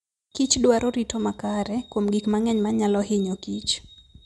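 No technical faults can be heard anywhere in the speech, and the signal stays continuous and steady throughout.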